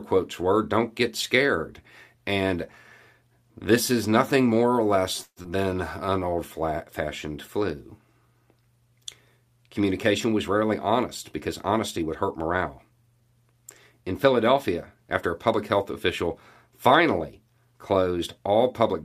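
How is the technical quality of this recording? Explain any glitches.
The recording has four network-related glitches in the speech, clustered around 5 to 6 seconds, with a longer one near 12 seconds.

A call audio freeze runs from 5.23 to 5.39 s, right after "nothing more or less". Packets were likely delayed and the jitter buffer ran dry. The receiver stretches the last sound for about 131 ms, including about 50 ms of near-silence. Then speech resumes intact, now 131 ms later.

Short concealed packet loss follows at 5.42 to 5.47 s. About 60 ms of audio never arrived in time. The receiver patched only 16 ms by extending the last sound, then blended back. You hear a brief smear or wobble, and the delay drops by roughly 40 ms.

A jitter buffer slow-down runs from 6.06 to 6.31 s, just before "fashioned flu". The buffer was rebuilding its reserve, so single pitch periods were repeated, adding 43 ms. 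Speech plays at 87% speed with unchanged pitch. It sounds drawn out.

A jitter buffer speed-up spans 11.48 to 13.12 s. The buffer held too much audio, so short pitch-period pieces were cut out, roughly 100 ms in total. Speech runs at 107% speed at the same pitch. It sounds hurried.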